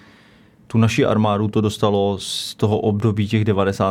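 A short speech recording, and nothing is technically wrong with it.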